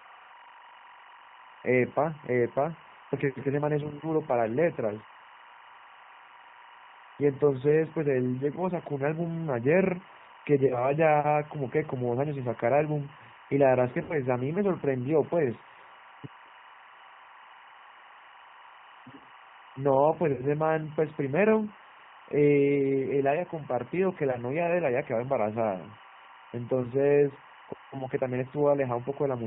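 A steady chirping warble sits behind the speech from start to finish, roughly 25 dB below it and flipping between pitches near 1 and 2 kHz. This is timecode bleed: linear timecode from an adjacent track or cable has leaked into the audio path. Its square wave toggles between those two frequencies as the bits change, and the rhythm of the chirping fits 24 frame/s code.

Throughout, the speech also sounds rough and slightly synthetic, with nothing above 4 kHz and plainly audible codec damage. This is the G.729 codec, and the sound points to an 8 kbit/s G.729A stream. The decoder rebuilds each 10 ms frame from a vocal tract filter, a pitch predictor and a few pulses, so it models the speech crudely.

Three times the speech smears into a buzzy tone or coloured noise that fades: at 10.67 to 10.93 s, at 14.03 to 14.18 s, and at 20.32 to 20.45 s. This is VoIP packet loss concealed by the speech codec. 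About 40, 60 and 70 ms of audio went missing, which fits four, six and seven lost 10 ms frames. The decoder extended its last pitch and filter while turning the gain down. Because each frame depends on the one before, the disturbance lasts well past the gaps themselves.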